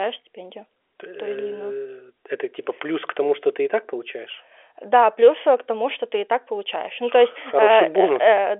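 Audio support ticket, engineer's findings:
No faults found.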